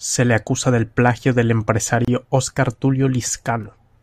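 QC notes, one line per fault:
2.05–2.08 s, gap at a join of encoded pieces: right after "acusa del plagio del" the speech stops for a gap of about 29 ms, left by encoder delay and last-frame padding at a join. Unlike a dropout, nothing is lost; the speech resumes where it stopped, with smeared edges.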